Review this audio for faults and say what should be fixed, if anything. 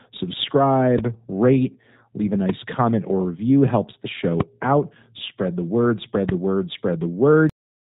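The speech runs through the G.729 codec the whole way. Everything above 4 kHz is gone and the voice has a rough, synthetic buzz, which fits an 8 kbit/s G.729-type coder rebuilding each frame from a filter and a few pulses. Plain 4 kHz band-limiting would sound dull but smooth, not grainy like this. Prevent it by carrying the call on a wideband codec such as G.722 or Opus.

There are two loud pops, at 4.40 to 4.43 s and at 6.29 to 6.31 s. They stand around 15 and 20 dB above the speech, and the speech carries on underneath them. That distinguishes them from dropouts, which leave a gap. They are likely voltage spikes from a plug, a switch or static reaching the input. Prevent them by securing connectors and grounding, and by not switching equipment during recording.

At 7.50 s the audio has a cut-off end. It stops mid-sound and drops straight to digital silence with no decay, because the final buffers were never written. 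A fade-out would taper off instead. Prevent it by flushing and closing the recorder properly before stopping.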